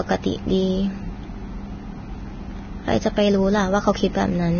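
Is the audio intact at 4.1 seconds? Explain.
No. At 4.1 seconds, as throughout the speech, there is heavy damage that sounds like likely Vorbis compression. Everything above 6.5 kHz is gone, and the remaining treble is coarsely quantised into grainy, hissy noise, which fits a bitrate near 18 kbps. That hiss marks it apart from a plain low-pass filter.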